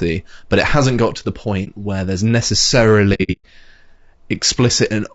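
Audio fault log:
Throughout: low-delay AAC compression. The speech sounds rough and grainy, with noise between harmonics. Short codec frames at a likely low bitrate, which fits about 32 kbps.
1.64–1.68 s: AAC frame loss with muting. A brief 30 ms dip. The lost stretch is zeroed and overlapping windows fade it out and back in.
3.14–3.46 s: AAC frame loss with muting. About 240 ms drops out in gaps spread over 300 ms, the longest about a tenth of a second, each faded out and in.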